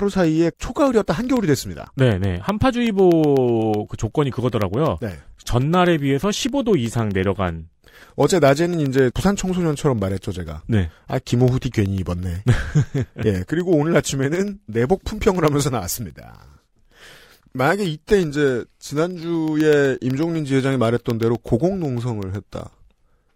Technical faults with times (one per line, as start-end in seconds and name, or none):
0.12-23.22 periodic USB or driver dropouts